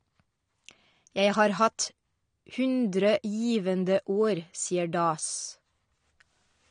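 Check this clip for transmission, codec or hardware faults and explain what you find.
One codec fault runs through the whole clip. Throughout, the speech sounds dull and smeared with an audible warbly fizz, most likely from AAC compression, which fits roughly 32 kbps. The encoder discards high bands, so a spectrogram shows a hard ceiling at 9.7 kHz.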